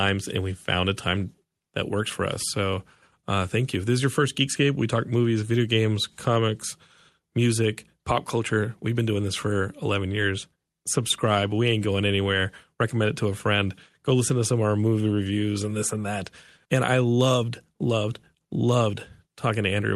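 The speech carries no technical faults, with the only audible processing being the ordinary coding character and limited top end of a call path whose upper band stops around 12 kHz.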